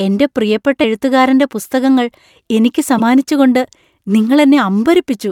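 Damaged data in a compressed stream hits this speech clip at 0.83 s, after "എൻ്റെ പ്രിയപ്പെട്ട", and from 2.97 to 3.01 s, after "പുസ്തകങ്ങൾ എനിക്ക്". Corrupted bytes make the decoder misread frames and lose sync until it finds the next frame header, producing brief blips.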